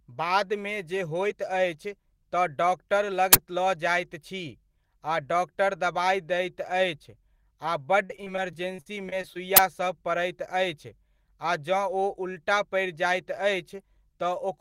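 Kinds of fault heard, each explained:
Uninitialised buffer: At 3.33 s and again at 9.57 s, a burst of harsh digital noise lasts about 21 ms. Each burst fits one 1024-sample block played out before any audio was written into it. That single, abrupt block of garbage sets it apart from a simple dropout or click.
Repeated packet loss (robotic sound): From 8.05 s to 9.36 s the speech turns choppy. Thirteen gaps, the longest 47 ms, remove about 240 ms, and each is patched by stretching the preceding sound. The rapid repetition across the stretch separates it from one isolated loss.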